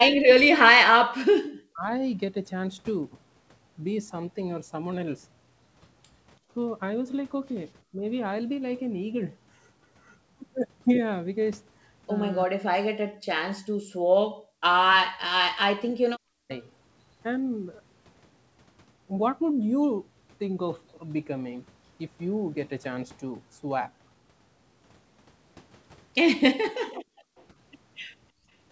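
From 0.15 to 1.9 s the voice sinks by roughly 40 dB. This is speech suppressed in double talk. The likely cause is an echo canceller that could not tell the near talker from loudspeaker echo while both sides spoke. It turned both down. The same dip returns briefly at 7.92 to 8.03 s, only about 10 dB deep. It is deep again at 12.46 to 12.95 s and at 14.99 to 16.51 s.

Between 13.23 and 14.64 s the room sound is turned down. In total this lasts about half a second, and it falls by about 38 dB. This is background gated by the echo canceller. It clamped the microphone while the loudspeaker played, then released it.

From 26.87 to 27.44 s a faint copy of the voice trails 332 ms behind, about 30 dB down. This is echo leak, likely from a loudspeaker whose canceller missed some pickup. A short double-talk cut falls inside it, at 26.96 to 27.03 s. Background gating follows from 27.31 to 28.5 s, about 32 dB deep. 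Throughout, the G.722 call path stops everything above 8 kHz.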